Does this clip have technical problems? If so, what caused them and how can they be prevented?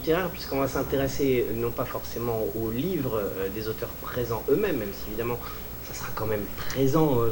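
Yes. A video or display buzz runs throughout, roughly 10 dB below the wanted signal: a buzz at the 59.94 Hz field rate with hash above it, plus a 15.7 kHz line-rate whine, from a screen or video cable coupling into the audio. Route audio away from display cables and use balanced, well-grounded connections.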